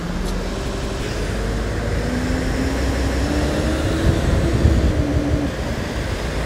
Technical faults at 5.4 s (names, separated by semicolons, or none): repeated buffer